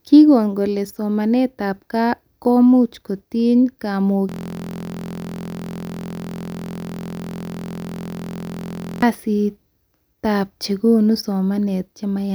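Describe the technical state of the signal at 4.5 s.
At 4.5 s the speech has given way to a steady, rough buzz at about 43 Hz that holds unchanged from 4.29 s to 9.02 s. This is a system hang loop. The computer or driver stalled while the audio hardware kept replaying its last ring buffer, so one 23.22 ms slice of sound repeats exactly, around 200 times. That loop length fits a 1024-sample buffer, and a loop this short fuses into a continuous buzz rather than a stutter.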